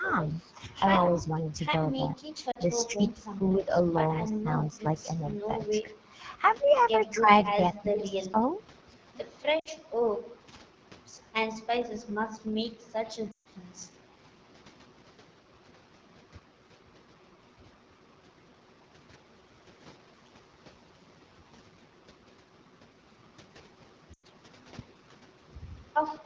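The whole clip carries a rough, raspy texture from the AMR wideband (HD Voice) codec, which fits one of its lowest modes, around 8.85 kbit/s. From 1.95 to 2.24 s the speech dips by roughly 20 dB, likely speech suppressed in double talk, where the echo canceller ducks the talker while the far side speaks. It happens again at 2.8 to 3.67 s (about 10 dB), 4.31 to 4.85 s (about 25 dB), 5.82 to 5.95 s, and 7.2 to 8.37 s. Between those, at 2.51 s, there's a 40 ms drop toward near silence from lost AMR speech frames, where the decoder fills the gap by reusing its last good settings at falling gain. Around 7.32 s a faint echo leak likely slips in, a copy of the sound about 20 dB down and 216 ms late. More lost frames follow at 9.59 s (60 ms), 13.32 s (140 ms, a quick drop to near silence), and 24.14 s (100 ms).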